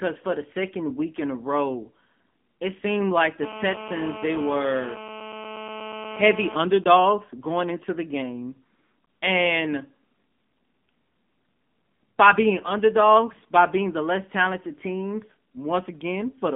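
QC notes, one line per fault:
Throughout: AMR narrowband mobile codec. Speech is squeezed into about 200 Hz to 3.5 kHz with nothing above, and the plainly buzzy, synthetic texture fits the 7.95 kbps mode.
3.43–6.56 s: GSM phone buzz. A hard, raspy 217 Hz buzz sits about 13 dB under the speech, steady throughout, as a nearby handset on a call gets rectified.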